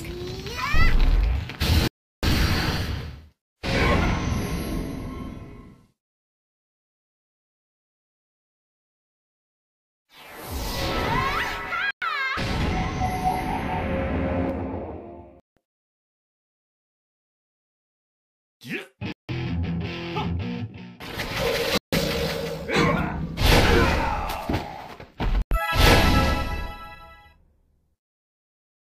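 A wireless link that likely held up its packets, letting the receiver's buffer run empty, causes a Bluetooth stall six times: the sound drops to silence at 1.88 s for 354 ms, then at 11.91 s (110 ms), 15.40 s (168 ms), 19.12 s (166 ms), 21.78 s (151 ms) and 25.42 s (94 ms) before returning.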